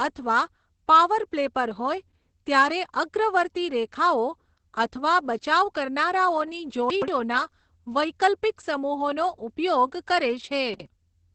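From the start, the whole clip carries heavy Opus voice compression. Nothing sounds above about 8.6 kHz. The speech is muffled, hoarse and slightly robotic. The coarse excitation points to the SILK speech coder at a low rate, which fits roughly 10 kbps.

At 6.90 to 7.08 s, chunks play out of order. A 60 ms piece arrives two chunks late and plays after the audio that should follow it. There are three hard joins, and the moment sounds jumbled.

Just after "વૈકલ્પિક સમૂહોનો ઉપયોગ કરે", at 10.74 to 10.86 s, it happens again. This time one 60 ms chunk plays one place late. The result is a short garbled stretch.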